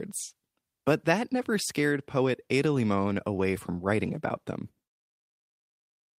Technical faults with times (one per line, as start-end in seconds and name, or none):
none